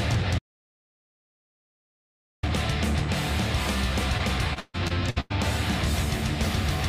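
At 0.39 s the audio drops out to silence and stays there until 2.43 s, about 2.04 s of silence with no room tone underneath. The likely cause is a lost input while recording continued, so whatever sounded in that span is gone.

From 4.17 to 5.32 s there is repeated packet loss, heard as choppy sound. Six separate holes, the longest 137 ms, are bridged by stretching the preceding sound, so roughly a third of the stretch is synthetic fill and pieces are missing.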